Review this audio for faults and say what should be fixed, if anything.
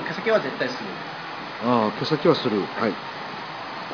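Nothing needs fixing: the signal holds steady throughout with no audible technical faults.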